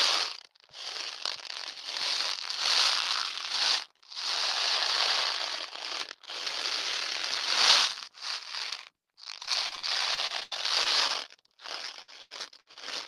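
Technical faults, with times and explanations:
9.45 to 11.11 s, repeated packet loss (robotic sound): ten gaps in quick succession, about 280 ms missing in all and the longest 83 ms. Each hole is bridged by extending the preceding sound, so 17% of this stretch is synthetic fill, giving a choppy, mechanical texture with pieces dropped out.
11.57 to 11.60 s, short concealed packet loss: roughly 20 ms of audio arrived too late to decode. The receiver patched it by carrying the last sound forward for a few milliseconds before blending back into real audio, leaving a brief smear or wobble.
12.02 to 12.78 s, repeated packet loss (robotic sound): four gaps totalling about 220 ms, the longest 86 ms, all filled by continuing the prior sound. With 29% of this span concealed, the fill dominates more than in the earlier run, so the sound turns choppy and broken.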